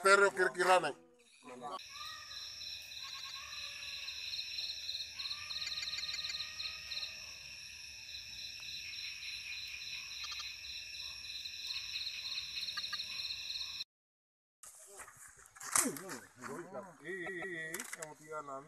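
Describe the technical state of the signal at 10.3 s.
Repeated frames, 10.23 to 10.46 s. A 78.4 ms block plays three extra times, heard as a stutter. This adds about 235 ms to the audio.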